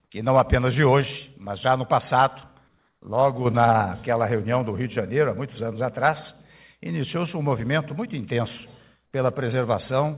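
From 2.68 to 3.02 s, the real background gives way to steady, featureless noise at unchanged level, likely comfort noise filling a pause in transmission.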